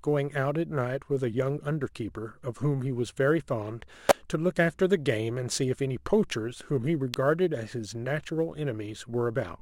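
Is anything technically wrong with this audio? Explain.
Yes. The speech carries sample clock jitter throughout. The converter's clock wanders by a few microseconds, so samples land early or late, with the largest errors on steep, loud, bright passages. The result is a roughness around 35 dB below the speech, seen as diffuse high-frequency haze that tracks the voice and vanishes in pauses.

There are also two sharp snaps at 4.09 s and 7.14 s, each a brief electrical switching spike, likely from a nearby switch or static discharge. On the waveform each appears as a narrow spike riding over the speech, and on the spectrogram as a thin vertical line spanning the full frequency range.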